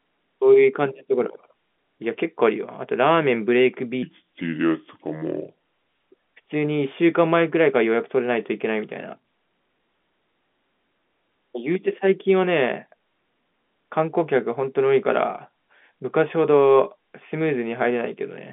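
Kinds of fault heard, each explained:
Section at the wrong speed: from 4.03 to 6.14 s the speech runs at 0.75 times its proper rate, so it drags noticeably and the pitch sinks by roughly five semitones, because slowing playback stretches every cycle of the waveform. It snaps back to normal right after. The likely cause is that stretch being played against the wrong clock somewhere in the chain. The slowed part still sits inside the same telephone band, with nothing above 3.7 kHz.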